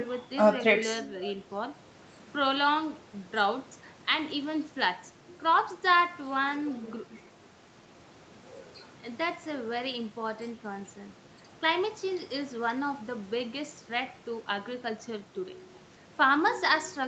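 Nothing in this speech stands out as a fault, and the top end stopping at around 8 kHz is just what you'd expect from the call's microphone processing and the Opus codec carrying it.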